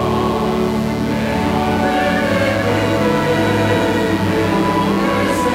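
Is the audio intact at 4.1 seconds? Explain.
No, mains buzz runs throughout, including 4.1 s: switching spikes on 60 Hz power leak in, giving a steady raspy buzz, fairly strong beneath the sound.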